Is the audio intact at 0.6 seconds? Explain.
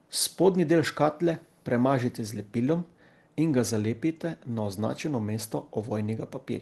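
Yes, the speech at 0.6 seconds is intact, with no dropout, glitch or other fault at that moment.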